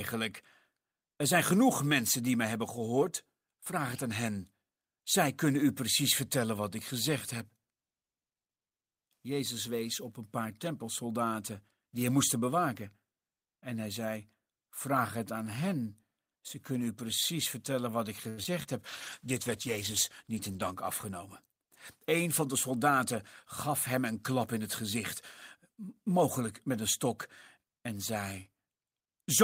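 Repeated packet loss (robotic sound) hits this speech clip from 18.29 to 18.66 s, right after "precies vertellen wat ik": several short holes, the longest about 82 ms, are patched by stretching the preceding sound, so about a third of that stretch turns choppy. A call bitrate drop follows from 18.87 to 20.83 s. Its rougher, duller coding suggests the encoder falling from around 32 kbps to about 15 kbps, with coarser quantisation and trimmed high frequencies making the sound watery and muffled for nearly two seconds. A jitter buffer speed-up overlaps its end, from 20.48 to 21.50 s: the receiver drains excess buffered audio by cutting out small pitch-period slices, removing about 50 ms in total, so the delivery runs at 104 % speed, slightly faster but at unchanged pitch.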